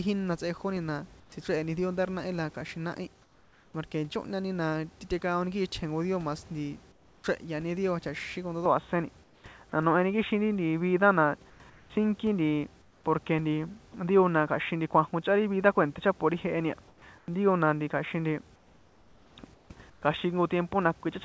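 A speech recording, most likely carried over a discontinuous-transmission call link whose receiver substituted comfort noise in place of the background during pauses, replacing the real room noise with a steadier, featureless hiss, about 4 to 6 dB quieter in the first four pauses, at 1.20–1.32 s, 3.22–3.74 s, 6.92–7.24 s (just after "dio mas nti"), 9.24–9.44 s, 11.50–13.94 s and 16.88–20.02 s. At 8.66 s the input likely switched to a poorer device without any gap, so from there to the end the sound loses everything above 3.8 kHz, turns duller and boxier, and shifts a few dB in level over a new, very faint noise floor. At 13.92 s the voice detector likely dropped sound, mistaking about 10 ms of it for background and cutting it off into the surrounding comfort noise.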